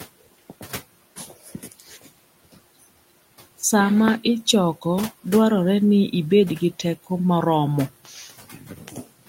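From 1.16 to 2.08 s, and again from 8.04 s after "ibed gi teko moromo" to the end, the speech turns swallowed and faint, dipping about 13 dB, then about 18 dB. This is speech cut by the noise suppressor, which mistook quiet speech for the low room noise and turned it down.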